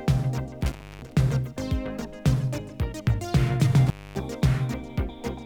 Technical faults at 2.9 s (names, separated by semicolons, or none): none